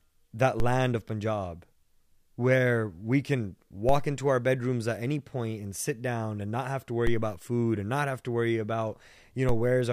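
The waveform's zero line jumps by about −18 dBFS four times, a DC step at 0.6 s before "land of", 3.89 s after "where we can", 7.07 s after "and not have to", and 9.49 s, each offset draining away through a 2 Hz high-pass. Every jump lands as a low thump or click beneath the speech.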